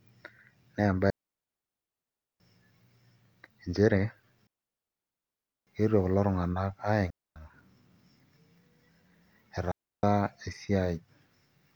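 A speech clip with four digital wireless dropouts, at 1.1–2.4 s, 4.47–5.67 s, 7.10–7.36 s and 9.72–10.03 s. The receiver loses its data and mutes quickly. Each leaves a clean silent hole without noise bursts.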